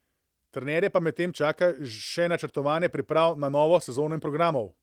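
Nothing here is going wrong on the technical side; the speech simply comes through the Opus voice coding, which at roughly 24 kbps in its hybrid mode keeps the full band of the sound.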